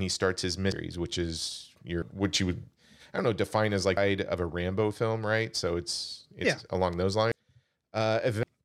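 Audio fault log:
0.72, 2.02, 3.97, 7.32 and 8.43 s: compressed frames skipped. The speech leaps ahead by roughly half to three-quarters of a second, several whole frames of about 93 ms, as between "he starts his" and "which is".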